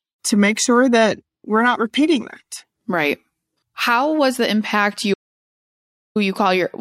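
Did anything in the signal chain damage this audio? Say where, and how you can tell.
Yes. From 5.14 to 6.16 s speech falls to dead silence, no room tone: an audio dropout to silence, likely lost input link recording silence.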